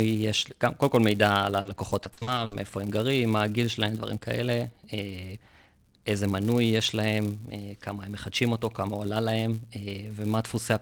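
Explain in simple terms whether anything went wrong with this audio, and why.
Yes, two things went wrong. Running through the whole recording is a steady buzz, like a low tick repeating about 172 times a second, which grows louder when the speech is louder and fades when it's quieter. That is a filter restarted on every block: the processing forgets where it left off at the end of each chunk of audio and starts the next one from scratch, leaving a tiny click at each join. The rate fits chunks of 256 samples.

Between 1.61 and 2.53 s the speech turns choppy, with bits of sound dropping out. That is repeated packet loss. Pieces of the audio went missing or arrived too late, over and over, and each hole was covered by stretching the sound just before it, the longest patch about 60 ms. Roughly a quarter of that stretch is filled-in sound rather than the real thing.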